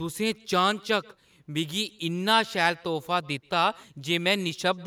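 Speech with echo and no canceller throughout. A faint, thin copy trails each phrase by roughly 150 ms, about 28 dB down, returned from a far-end loudspeaker and microphone.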